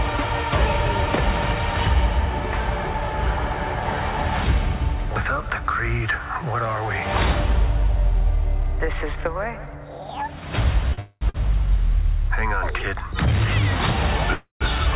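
Audio carried over a call link, band-limited with nothing above 4 kHz, which fits narrowband G.711 mu-law coding, has two kinds of timing fault. A short stall from a late packet occurs at 10.94–10.99 s and again at 11.29–11.36 s. The last sound is held for about 40 ms and then 50 ms, with only a slight buzz or dip, while the receiver waits for the overdue packet. Playback then picks up exactly where it left off, so nothing is lost. The brevity and the absence of any silence set these apart from the longer events. A call audio freeze follows at 10.99–11.23 s and again at 14.33–14.63 s. Here the sound is extended for roughly a quarter of a second as a buzz or hiss that fades away. The first briefly touches silence, and the second goes quiet for about 110 ms before the audio resumes from where it stopped. These are likely caused by packets held up in transit, draining the jitter buffer, so a gap is inserted rather than audio removed.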